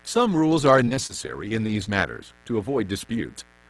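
A steady, raspy buzz sits under this speech recording from start to finish, roughly 30 dB below the talker. It is mains buzz: sharp switching spikes leak in twice per cycle of a 60 Hz supply, stacking harmonics of 60 Hz up into the kilohertz range. From 0.85 to 1.88 s the speech turns choppy. This is repeated packet loss, giving a robotic sound. Short holes follow one another closely, none longer than 25 ms, and each is patched by stretching the preceding sound, so about 14% of that stretch is filler. The audio also tops out near 12 kHz, which fits the call codec it passed through.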